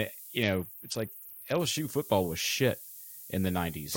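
A speech clip with two problems stacked on top of each other. Running the whole way through is low bit depth with noise shaping: there's a constant thin hiss that climbs steeply toward the top of the band, sitting not far under the speech, roughly 15 dB down. That's what you get when the signal is squeezed into very few bits, which fits something like 7-bit words, and the rounding error is fed back so it gets pushed up into the treble instead of spreading evenly. Then from about 0.43 to 1.60 s there's a Bluetooth SBC bit pool drop. The top end goes dull and a gritty, coarse noise comes up over the speech, then it clears once the link recovers. It sounds like the phone backed the bit pool right off, consistent with a fall from around 28 to 7, or roughly 66 kbps, to keep the stream alive on a crowded link. That leaves the upper sub-bands starved and everything else crudely quantised.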